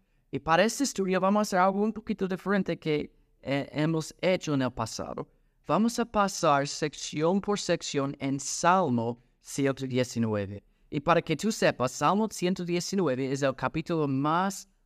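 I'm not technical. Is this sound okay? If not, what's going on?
No. From about 5.73 to 9.58 seconds there is a Bluetooth SBC bit pool drop. The wireless link got crowded, so the phone cut how much detail it sends, roughly halving it. The highest sounds get dropped first, and the rest is stored more crudely. That is why the speech turns dull and muffled there, with a gritty, sandy noise on top. At 9.58 seconds the link recovers and the clarity returns.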